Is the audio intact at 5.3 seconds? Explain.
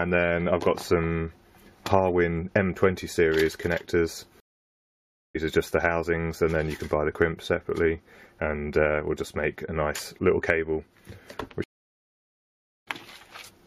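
No, 5.3 s falls inside a stream reconnect running from 4.40 to 5.36 s. The connection dropped, leaving about 0.95 s of silence, then a fresh decoder picked up mid-stream, so the sound fades back in roughly 0.7 s further along.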